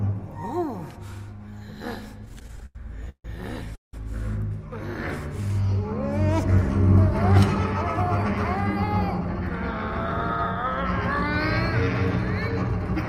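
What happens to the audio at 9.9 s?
Nothing goes wrong at 9.9 s; the audio plays through that moment intact, with no dropout, click, glitch or other fault.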